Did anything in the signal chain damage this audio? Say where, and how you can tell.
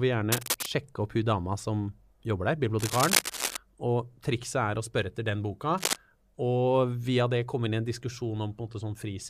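Yes, in the analogue wiring. Cable scratch noise appears three times: 0.32 to 0.66 s, just before "opp hun dama"; 2.79 to 3.57 s, right after "jobber der"; and 5.77 to 5.96 s, after "spørre etter den boka". Each is a dense, irregular burst of scratching roughly as loud as the speech. The likely cause is a worn cable or connector being moved, its contact resistance fluctuating rapidly and injecting ragged noise into the signal.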